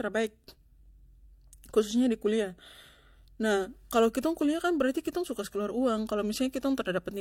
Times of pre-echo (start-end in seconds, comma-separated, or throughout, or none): none